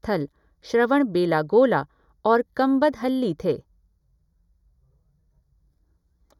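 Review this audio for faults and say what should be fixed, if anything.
The speech carries channel delay (comb filtering) from start to finish. One channel trails the other by roughly 0.2 ms, and summing to mono cancels shared content at evenly spaced frequencies, with the first notch near 3 kHz. The hollow, phasey tone stays fixed rather than sweeping like flanging, and the high end has gaps, not a smooth roll-off like low-pass dulling. Align the channels before any mono fold-down and check polarity and phase correlation.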